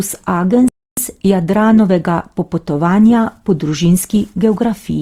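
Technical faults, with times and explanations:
throughout: Opus compression, likely a low-rate Opus encode in its music mode, fitting about 24 kbps; bandwidth stays full but the speech turns rough, grainy and noisy.
0.68 to 0.97 s: playback stall, likely the player running short of data, so the output cuts to silence mid-flow for 0.29 s before the sound returns.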